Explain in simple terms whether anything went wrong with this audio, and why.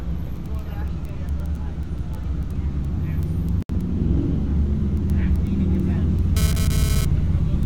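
Two things went wrong. From 3.62 to 3.69 s there is a gap at a join of encoded pieces. The sound drops out for about 70 ms and then resumes where it stopped. The audio was encoded in separate pieces of about 6 seconds, and the silent padding each encoder adds was never trimmed before joining.

From 6.37 to 7.05 s there is GSM phone buzz, a harsh, raspy buzz at 217 Hz that has nothing to do with the sound itself. A nearby 2G phone transmitting data in bursts was picked up and rectified by the audio circuitry, so the buzz comes and goes.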